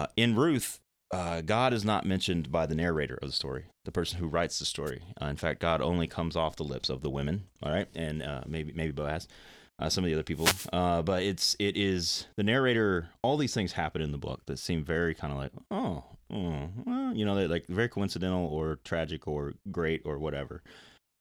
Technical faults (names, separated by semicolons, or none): wireless microphone noise hit